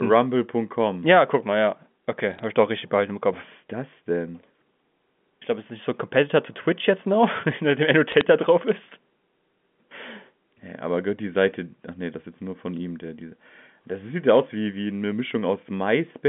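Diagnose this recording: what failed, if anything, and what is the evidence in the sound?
Bit errors on a digital phone line, at the network stage. Sharp ticks and crackle sit over the speech from 2.31 to 2.44 s and from 8.10 to 8.21 s. Each flipped bit corrupts one G.711 sample. Hits on sign or high bits give the loudest ticks.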